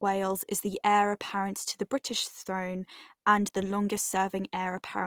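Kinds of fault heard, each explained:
Opus compression: the speech turns plainly grainy and rough rather than MP3-like swirly, with bandwidth reaching 20.4 kHz. This is likely Opus music-mode coding at a low rate, fitting 24 kbps.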